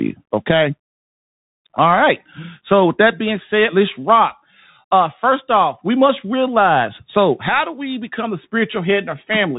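From start to finish the speech carries the sound of a Bluetooth CVSD headset codec, a narrowband link that fits CVSD's 64 kbps stream. Each sample is a single up-or-down bit with an adapting step, so fast, loud high content outruns the step and distorts, s sounds turn scratchy, and a grainy hiss sits beneath everything. A spectrogram shows a hard ceiling at 3.8 kHz with nothing above it, while the waveform looks stepped and fuzzy around loud transients.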